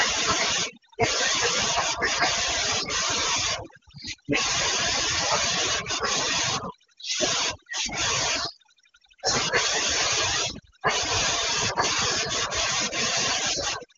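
Throughout the speech, overdone noise removal cuts any frequency band near its noise estimate, leaving near-silent gaps with twinkling specks.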